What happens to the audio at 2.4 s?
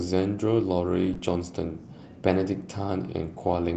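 Nothing goes wrong at 2.4 s: the speech there runs through intact, with only the ordinary band-limited character of the call codec path and no dropout, glitch or distortion at that point.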